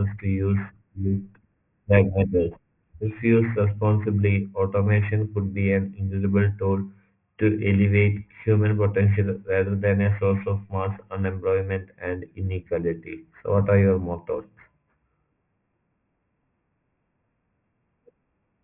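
A speech clip with aliasing the whole way through. Everything above about 3 kHz has folded back down into the band, so sibilants come out gritty and metallic, with odd unrelated tones layered under them at roughly 25 dB below the speech. The spectrum runs hard up to a 3 kHz edge, which fits the audio being dropped to a 6 kHz rate without an anti-aliasing filter first.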